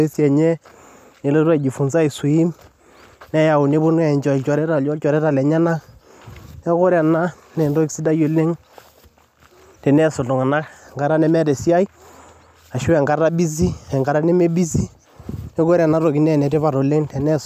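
Nothing in this speech recording stood out as a technical problem on listening.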